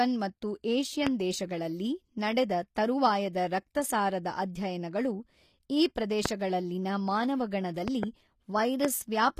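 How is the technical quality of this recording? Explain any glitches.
The recording is speech with clear technical problems: codec damage throughout, a series of loud pops, and one brief pre-echo.

HE-AAC compression: Across the whole clip, the treble has likely been rebuilt by a low-rate HE-AAC codec. The codec transmits only the lower spectrum and synthesises the top by copying lower bands upward under a coarse envelope. The damage is plainly audible: s sounds turn gritty or lispy because the regenerated harmonics don't match the real ones, and nothing is present above 14.9 kHz. This points to a low bitrate, around 24 kbps.

Loud pop: Sudden electrical transients, likely from a plug, switch, static discharge or driver glitch, land on top of the signal at 1.07–1.09 s, 6.26–6.28 s and 8.85–8.87 s. Each is a single sharp pop about 20 dB above the speech. Between 7.88 and 8.05 s there are two pops in quick succession, about 15 dB above it. 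Each spike is shaped by the circuitry downstream, and the speech continues underneath it.

Pre-echo: At 3.33 s, a sharp attack falls late in a transform block. The codec spreads quantisation noise across that whole block, so noise sized for the loud onset also fills the quiet gap just before it. The result is a short hiss, about 19 ms long, leading into the attack, which sounds soft and smeared rather than crisp.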